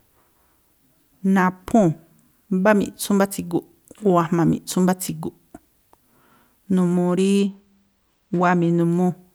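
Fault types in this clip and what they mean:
Channel delay (comb filtering): one channel runs a tiny fraction of a millisecond behind the other, around two samples, and the mono sum cancels shared content at evenly spaced frequencies starting near 10 kHz, so from 7.39 to 8.80 s the speech turns dull.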